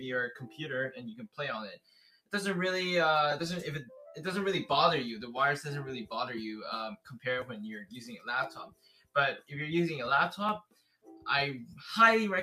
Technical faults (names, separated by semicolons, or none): noise suppressor applied to music or sounds; sound cut by the noise suppressor